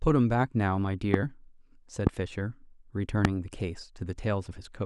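Three loud pops interrupt the speech, at 1.14–1.16 s, 2.07–2.09 s and 3.25–3.27 s. Each is a single sharp transient lasting roughly 20 ms and peaking about 20 dB above the speech level, which continues uninterrupted beneath it. The most likely cause is a brief voltage step or pulse, such as a connector, switch, static discharge or driver glitch, entering the signal chain and being shaped by the downstream circuitry into an audible click-thump.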